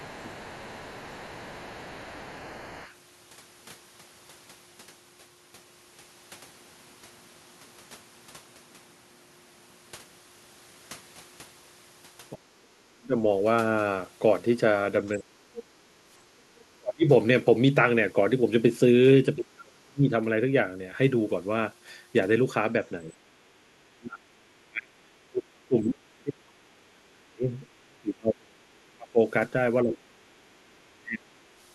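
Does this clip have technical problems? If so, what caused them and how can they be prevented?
Yes. A faint second voice, the other side's voice leaking through, sits well below the main speech from 0.00 to 2.94 s and again from 15.21 to 16.61 s. It is likely loudspeaker echo that the canceller did not fully remove. Unlike double-talk suppression, it adds sound rather than removing it. Using a headset prevents it.

Speech suppressed in double talk appears at 0.02–0.46, 12.34–13.15, 15.16–17.05, 19.36–20.11 and 23.02–31.32 s. The main voice dips at first, then drops deeply. The likely cause is the canceller ducking everything while both sides spoke. This loss hits the talker, not just the room sound. A headset or full-duplex echo cancellation prevents it.

Input switched to a poorer device: from 6.35 to 10.18 s the sound abruptly turns duller, with a lower level and a new noise floor. There is no gap at the changeover. 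The likely cause is a change of microphone or headset profile. The whole tone changes, rather than dropping in pieces. Locking the input device prevents this.

Background gated by the echo canceller: at 15.84–15.93 s the room sound dips by about 7 dB for 70 ms. The canceller clamped the microphone while the loudspeaker played. The dip is brief and shallow and affects the ambience rather than the speech. Gentler suppression settings prevent it.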